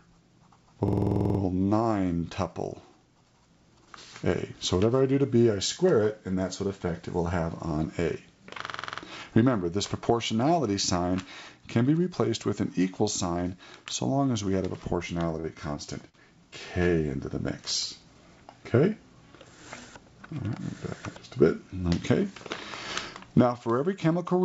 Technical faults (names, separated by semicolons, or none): system hang loop; short stall from a late packet